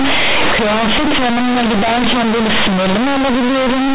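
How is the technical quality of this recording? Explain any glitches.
Poor: the speech is badly distorted from start to finish by a single fault, companded audio read as linear. The G.711 mu-law telephone coding underneath is sound, and nothing above 4 kHz comes through.

Throughout, the mu-law bytes are being played as plain linear 8-bit samples without expansion. The logarithmic codes become raw amplitudes, so quiet passages swell to the size of loud ones and every sign change jumps across much of the range, giving harsh, very loud buzzing distortion and heavy noise filling the pauses.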